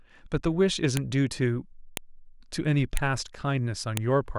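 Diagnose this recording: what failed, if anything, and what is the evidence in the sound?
The fault is a file header played as audio, introduced where the recording was stored or streamed as separate pieces and joined. Sharp, loud clicks occur at 0.97, 1.97, 2.97 and 3.97 s, exactly one second apart and independent of the speech. Each new one-second WAV piece kept its header, and those bytes were decoded as a burst of samples. Buffer underruns would leave gaps or stutters and drift in timing, but here nothing is missing and the spacing is rigid.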